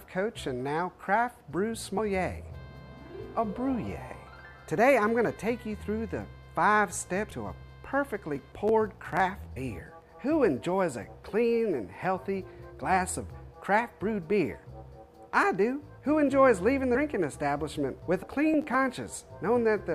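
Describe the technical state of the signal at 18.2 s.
At 18.22 s the audio lurches forward. Compressed frames were skipped: roughly a tenth of a second went unplayed, which fits about four 23.2 ms frames.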